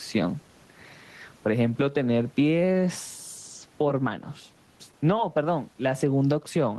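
Right from the start and all the way through, there's gain pumping on the speech. The gain ducks by something like 10 dB the moment a loud syllable lands, and the room noise sits about 40 dB under the speech. That's likely the input gain set far too high, with a fast limiter clamping down on each peak, which also leaves the speech sounding squashed and flat in level.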